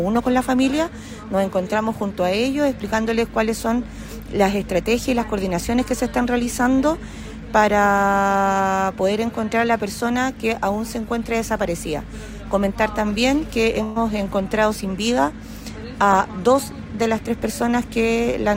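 Burst of packet loss from 13.83 to 13.98 s. Roughly 120 ms of audio never arrived. The receiver filled the gap by extending the last sound and fading it down. It becomes a held buzz or fading hiss. Then the audio jumps ahead, missing that stretch.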